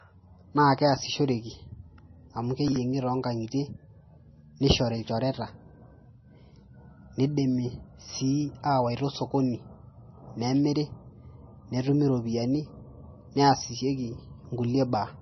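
Speech runs through likely MP3 compression at a very low bitrate, probably near 24 kbps. Nothing above 6 kHz survives, and the codec damage is heavy, so the voice sounds watery and smeared throughout. From 2.68 to 2.76 s, chunks play out of order: one 40 ms chunk lands a chunk late, swapping places with its neighbour and producing a brief jumbled moment.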